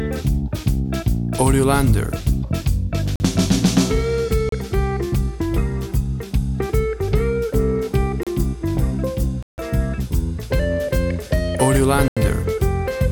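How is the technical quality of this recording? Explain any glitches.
The recording has five dropouts. Blocks of digital silence fall at 3.16–3.20 s (43 ms), 4.49–4.52 s (32 ms), 8.23–8.27 s (33 ms), 9.43–9.58 s (154 ms) and 12.08–12.17 s (85 ms). Each time, the output buffer likely went unfilled and zeros were played instead. The 43 ms and 85 ms gaps fit 2048- and 4096-sample buffers. The audio cuts abruptly to nothing and back with no fade. The shorter ones register as short holes, the 154 ms one as a clear gap.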